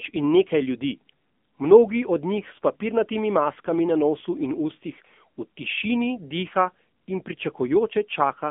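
Throughout the speech, an AMR narrowband mobile codec has squeezed the signal into a 200 Hz to 3.5 kHz line band, leaving nothing above 3.6 kHz. Plainly audible codec damage makes the voice buzzy and synthetic, consistent with a low-bitrate mode around 8 kbit/s.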